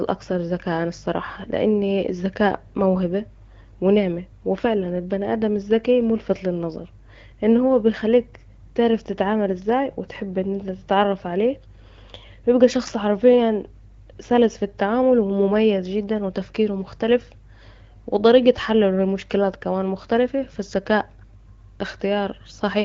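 No technical faults can be heard in this speech, which comes through the AMR wideband (HD Voice) codec at 12.65 kbit/s with only the light coding character expected at that rate.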